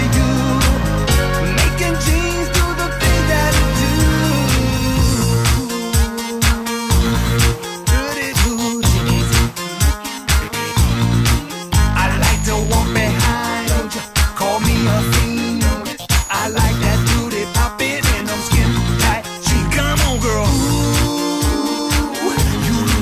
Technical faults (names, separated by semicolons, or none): none